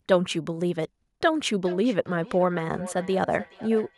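From 1.25 s to the end of the clip, the speech comes back as a feedback echo between two devices. A second device in the same room plays this microphone's signal aloud, the microphone picks it up again, and neither echo canceller removes sound played by the other device. Repeats arrive at a steady interval of roughly 0.4 s, thinner and more ringing, peaking at about 16 dB below the speech. Unlike room reverberation, which smears continuously, this returns as distinct delayed copies.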